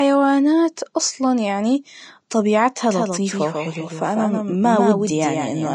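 From the start, the speech carries Vorbis compression damage. Nothing remains above 10.6 kHz. The treble turns hissy and grainy, and consonant onsets blur. This plainly audible damage fits a low bitrate of around 33 kbps, the likely cause.

At 2.91 s a doubled audio track begins and runs to the end. A second full-band copy trails roughly 150 ms behind, somewhat quieter. It enters abruptly, with no decay or room colour. A second capture path was likely mixed in.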